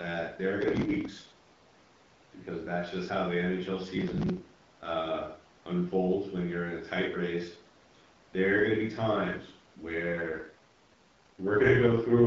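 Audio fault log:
0.61–1.64 s and 3.97–4.82 s, processor overload crackle: gritty tearing bursts, the first right after "there are", the second ending just before "uh unfolds when you're". Each burst is a run of missed processing deadlines. Short chunks are skipped outright, which fits buffers of about 3 ms. Roughly a hundred go missing in the first burst and about fifty in the second. Each skip leaves a hard-edged gap.
9.99 s to the end, AMR rate drop: after "are gonna be times" the speech turns rougher and more synthetic, but the bandwidth stays the same and there is no gap. The sound fits the network moving the AMR-WB (HD Voice) codec from its clear 12.65 kbit/s rate down to 6.6 kbit/s, its lowest, and spending the freed bits on error protection over a weak radio link.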